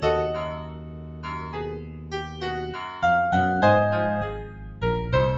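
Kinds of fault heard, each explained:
Noise suppressor applied to music or sounds: a speech-tuned suppressor stays on throughout, treating steady tones and tails as noise, so levels swing by roughly 15 dB.
Sound cut by the noise suppressor: at 0.53–1.56 s, 1.74–2.42 s and 4.44–4.82 s, held sound is mistaken for noise and sinks by about 8 dB.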